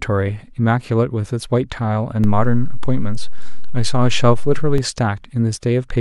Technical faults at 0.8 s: none

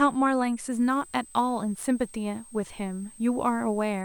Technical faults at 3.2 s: switching supply whistle; sample clock jitter

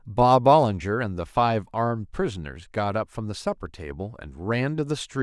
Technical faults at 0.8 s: none

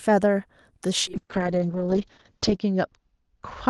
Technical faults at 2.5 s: call bitrate drop

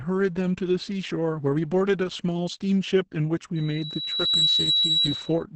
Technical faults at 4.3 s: Opus voice compression; loudspeaker feedback squeal

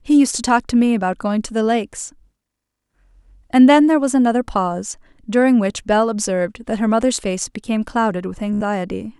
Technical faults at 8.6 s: Bluetooth stutter

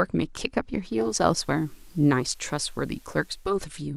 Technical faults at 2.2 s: digital radio blending to analogue

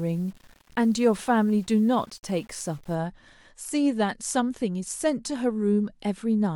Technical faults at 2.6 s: low bit depth without dither

